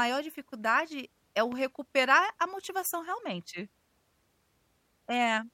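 Loud pop at 1.52 to 1.54 s, after "dificuldade é o": one sharp burst about 5 dB above the speech, likely a sudden voltage spike.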